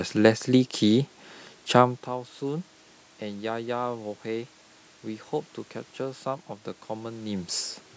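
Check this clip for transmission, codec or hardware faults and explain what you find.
Nothing stood out on listening to this speech clip, and the level shifts around 2 s and 7 s sound like the talker moving relative to the microphone.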